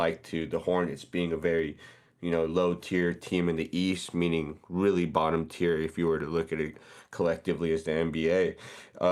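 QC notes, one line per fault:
Nothing to flag here; the speech comes through without a single problem worth a line.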